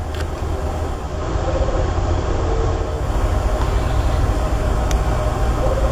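From 0.83 s to 3.17 s the sound turns slightly hissier, with a level drop of about 1 dB and a faint hiss roughly 30 dB under the signal, before the cleaner sound returns. This is digital radio blending to analogue: the receiver lost its digital stream and cross-faded over about 0.44 s to the same station's FM broadcast, whose noise floor is heard here, then faded back.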